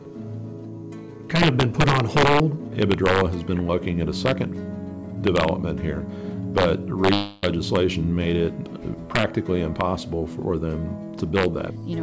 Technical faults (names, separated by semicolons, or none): integer overflow; long network dropout